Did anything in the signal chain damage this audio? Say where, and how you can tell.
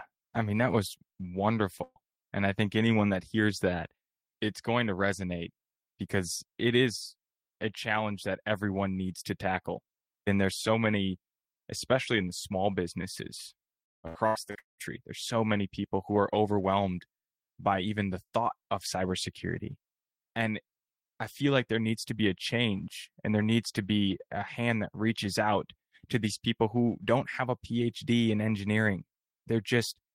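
Yes. From 1.83 to 1.99 s the speech smears into a held, fading sound before jumping ahead: a burst of packet loss on the network, about 120 ms concealed.

From 13.84 to 14.81 s the speech turns choppy and robotic through five dropouts, the longest about 200 ms. This is repeated packet loss, with roughly 60% of that stretch concealed.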